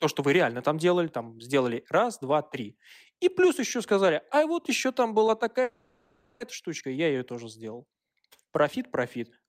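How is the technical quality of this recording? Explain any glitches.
The recording has one glitch, a call audio freeze from 5.63 to 6.42 s. The likely cause is packets stalling in transit, so the receiver's jitter buffer ran dry and had to improvise. For about 0.77 s the last bit of speech is stretched into a fading buzzy hiss, with no drop to silence. When the speech resumes it picks up exactly where it stopped, with nothing lost, but everything after arrives 0.77 s later than it should.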